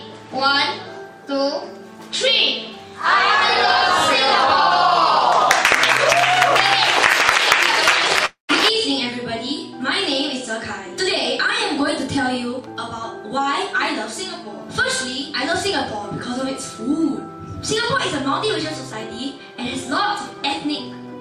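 At 8.25 to 8.51 s a call audio freeze stretches the last sound into a fading buzz or hiss, then about 130 ms of silence, before resuming intact. The likely cause is delayed packets emptying the jitter buffer. Jitter buffer speed-up follows at 12.17 to 12.74 s (110%), 18.92 to 19.83 s (110%) and 20.23 to 21.08 s (107%). Each time, pitch-period fragments totalling roughly 70 to 100 ms are cut, so the sound hurries at unchanged pitch.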